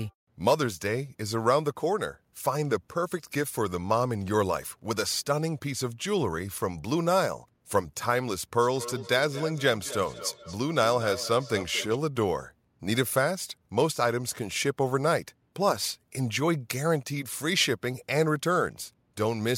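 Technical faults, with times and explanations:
8.61–12.01 s, feedback echo between two devices: the speech returns at a fixed gap of about a fifth of a second, peaking at about 12 dB below the direct speech. A second nearby device replays this microphone's audio, and the local echo canceller cannot remove sound it did not play. Unlike room reverberation, it forms discrete repeats at a steady interval.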